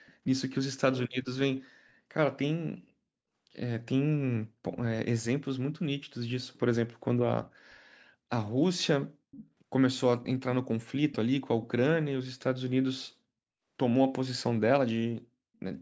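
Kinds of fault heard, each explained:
Echo leak, 9.31–9.5 s and 11.62–11.67 s: two brief scraps of a faint copy of the speech arrive 354 ms late and roughly 20 dB down. Likely the far side's loudspeaker reached its microphone and slipped past its echo canceller.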